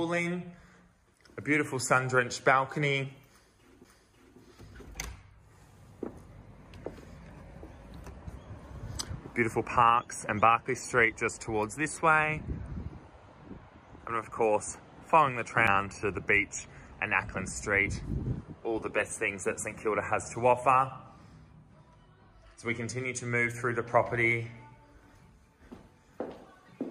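A CD skip occurs at 15.67 s. The player mutes for only a few milliseconds, heard as a short tick, and the audio then resumes from a different point on the disc. The laser has jumped across the spiral track, probably from a knock or a surface flaw.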